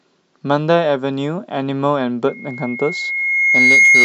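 At 2.28 s a loudspeaker feedback squeal begins and continues to the end of the clip at 4.05 s. The microphone is picking up its own loudspeaker, and at 2.2 kHz the loop gain passes unity, so that tone feeds on itself. It swells over about a second and a half into a piercing whistle roughly 10 dB above the speech. On a spectrogram it draws a single bright horizontal line at 2.2 kHz that thickens as it grows, and the waveform envelope swells steadily.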